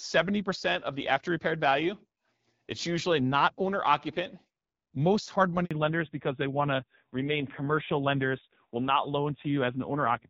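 At 5.65 s a handover gap cuts the speech for about 60 ms as the call switches networks. The voice dies away within a few tens of milliseconds rather than clicking or stuttering like packet loss. From 5.71 s to the end, fallback to narrowband removes everything above 4 kHz. The earlier wideband HD Voice sounds clear, consistent with 12.65 kbit/s, and the rest turns dull and raspy, which points to a low narrowband rate near 5.9 kbit/s.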